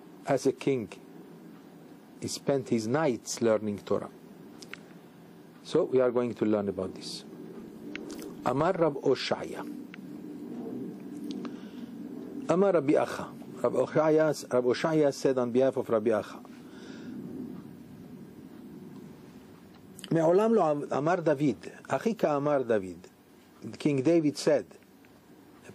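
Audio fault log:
7.56–8.95 s, filter restarted on every block: a buzz of evenly spaced ticks at 25 Hz, one every 40 ms, that rises and falls with signal level, unlike fixed-level clicks.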